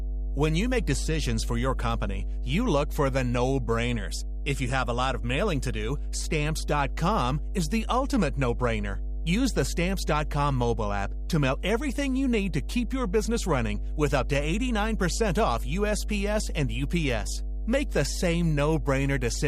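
From start to finish the speech sits over mains hum: a steady 50 Hz tone, loud enough to rival the voice, leaking in from a ground loop or nearby transformer. Unlike broadband rumble, it holds one fixed pitch with some low harmonics and never varies.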